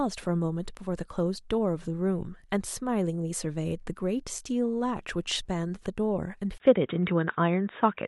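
Input switched to a poorer device at 6.58 s in this speech clip: after a 20 ms gap the sound turns dull, with nothing above 3.8 kHz, a modest level shift and a faint new noise floor, likely a change to a narrower-band microphone or headset profile.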